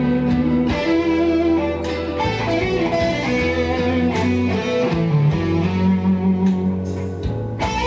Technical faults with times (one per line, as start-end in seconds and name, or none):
none